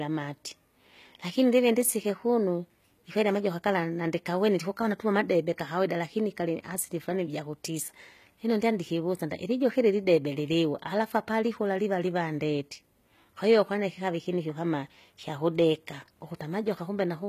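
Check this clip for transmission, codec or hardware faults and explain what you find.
There is one fault, and it runs through the whole speech clip: HE-AAC compression damage that is plainly audible. The treble still sounds present, yet s sounds come out gritty and metallic or lispy, and nothing reaches above 14.9 kHz. The likely cause is spectral band replication, where the coder keeps the lower spectrum and fills the upper range by copying lower bands upward under a coarse envelope, so harmonics fail to line up across the crossover. That points to a very low bitrate, around 20 kbps. A plain MP3 or AAC encode at this rate would sound dull and cut off, not bright but synthetic.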